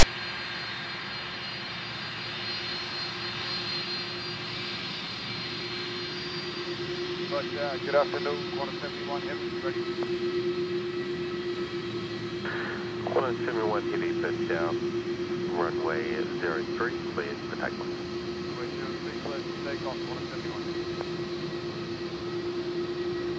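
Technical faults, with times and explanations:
0.00 to 0.03 s, file tags played as audio: text tag bytes are read as samples. This gives a brief, loud, lopsided rasp with hard edges.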